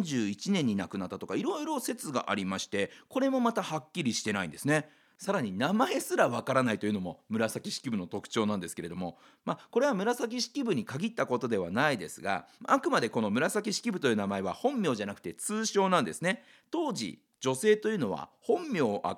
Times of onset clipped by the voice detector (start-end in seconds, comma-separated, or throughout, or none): none